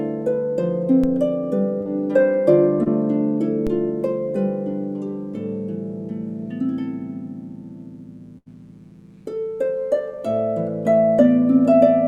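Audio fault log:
Throughout, mains buzz: a switching spike source, such as a dimmer, a rectifier or an unshielded lead, is coupling into the signal path twice in every cycle of a 60 Hz supply. Those sharp edges carry a long series of harmonics of 60 Hz up into the kilohertz range, so instead of a smooth hum there is a steady, raspy buzz sitting roughly 40 dB below the sound and running under every part of it.
1.04 s and 3.67 s, DC step: at each of these moments the zero line of the waveform jumps to a new offset, as happens when a converter recalibrates or an input carrying an offset is switched in. A high-pass stage around 5 Hz then pulls the offset back towards zero over a fraction of a second. The sudden shift is heard as a low thump, while the sound above it continues unaltered.
1.81 to 1.87 s and 2.83 to 2.88 s, short concealed packet loss: audio failed to reach the decoder in time, about 40 ms at the first point and about 20 ms at the second. 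The receiver bridged each hole by extending the preceding sound, for 40 ms and 26 ms respectively, then cross-faded into the real audio. Each spot comes across as a brief smear or wobble, and any very short sound falling inside the gap is lost.
8.38 to 8.48 s, burst of packet loss: a run of packets totalling about 80 ms was lost or arrived too late to be played. Concealment carried the last sound forward across the whole 80 ms and lowered its level as the gap continued, producing a held buzz or fading hiss in place of real material. When playback picks up again, it resumes further on, and the 80 ms that should have come in between is simply missing.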